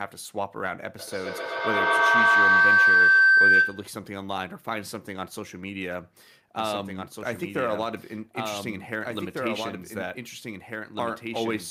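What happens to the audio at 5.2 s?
Nothing goes wrong at 5.2 s: the speech carries on through that moment with no dropout, glitch or other fault to be heard.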